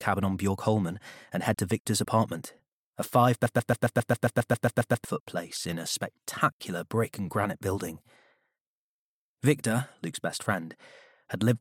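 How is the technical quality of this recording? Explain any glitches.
One clear glitch affects the recording. From 3.46 to 5.05 s there is a broken-record loop. A 135 ms fragment repeats exactly, twelve times. The stream likely stalled and kept resending its last fragment, so the audio due then is lost.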